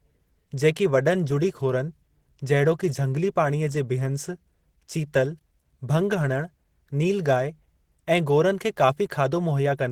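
Throughout this speech the sound is hoarse, grainy and muffled, with rough, noisy texture where clean detail should be, though content still reaches about 20.3 kHz. This is likely Opus compression in its hybrid speech mode, which fits a low bitrate near 16 kbps.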